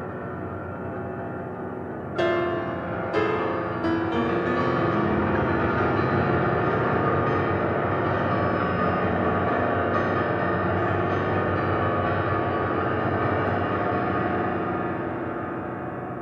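Nothing stood out as a technical fault anywhere in the recording on listening.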